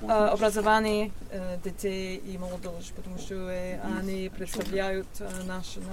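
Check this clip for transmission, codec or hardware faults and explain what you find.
Nothing stood out on listening to this clip.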